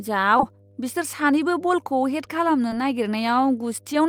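Running under the whole speech clip there's a mains hum, a steady low tone at 50 Hz sitting roughly 30 dB below the speech. That's power-line energy leaking into the signal, most likely through a ground loop or a nearby transformer, so it never lets up between phrases and you'll notice it most in the pauses, with a little low-harmonic buzz on top of the fundamental.

Then there are two spots of short concealed packet loss. The first runs from about 0.37 to 0.41 s, right before "बिसोर सानैबो". The second is at about 2.69 to 2.73 s, just after "हेड खालामनो". Each time a slice of the call, around 20 ms worth, didn't reach the decoder in time, and the receiver papered over it by stretching out the preceding sound before blending back into the real audio. It comes across as a quick smear or wobble rather than a hard dropout.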